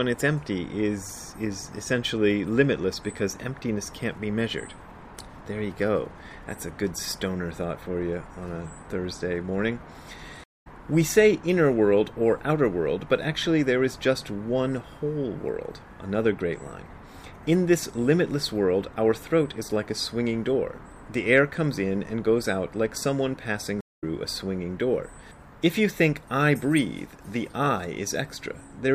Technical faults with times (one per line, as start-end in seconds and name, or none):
10.44-10.67 stream reconnect
23.81-24.04 stream reconnect